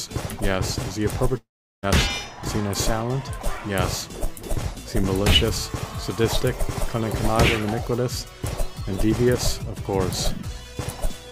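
A long network dropout likely cut delivery from 1.37 to 1.85 s, fading as a buzz into silence and resuming with 460 ms lost.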